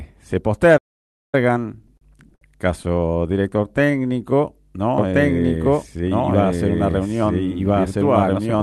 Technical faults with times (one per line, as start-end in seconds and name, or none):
0.77-1.35 playback stall
1.61-2.42 repeated stalls (stutter)
3.18-3.98 jitter buffer slow-down
4.98-8.63 doubled audio track
5.95-6.35 jitter buffer speed-up